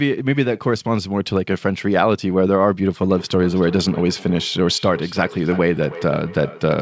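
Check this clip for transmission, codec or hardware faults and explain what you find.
One fault: feedback echo between two devices, from 3.01 s to the end. A second device in the room replays the call, and the first microphone re-captures it beyond its echo canceller's reach. Speech returns roughly every 300 ms, thinner and ringing, peaking at about 15 dB below speech. The band stops at 8 kHz, which fits G.722 at 64 kbps.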